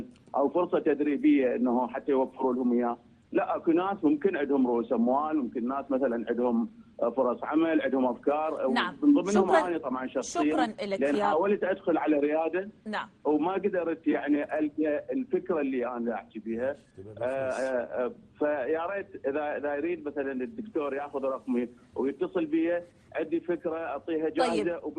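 Nothing is technically wrong with this audio, and no fault can be heard at any point.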